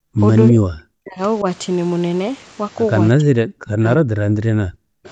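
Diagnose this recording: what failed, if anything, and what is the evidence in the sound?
Background gated by the echo canceller (call processing): from 0.0 to 0.18 s the room sound drops by about 40 dB while the far end plays, then returns when the canceller releases.

Speech suppressed in double talk (call processing): from 0.5 to 1.2 s and 3.17 to 5.06 s the talker dips deeply, likely because the canceller misread simultaneous talk as echo and attenuated both.

Bluetooth SBC bit pool drop (codec): from 1.51 to 2.58 s the treble dulls and gritty quantisation noise rises, which fits a bit pool falling from 28 to 12, near 96 kbps.

Echo leak (call processing): from 5.04 to 5.11 s a faint copy of the voice, far below the main signal, arrives 328 ms late, likely residual loudspeaker echo the far-end canceller failed to remove.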